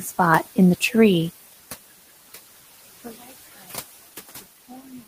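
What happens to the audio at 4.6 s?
At 4.6 s the speech carries noise suppressor artifacts, present throughout the clip. The suppressor pulls down bands it judges to be steady noise, frame by frame, by about 15 dB, so the room noise sinks between phrases and surges back under the voice.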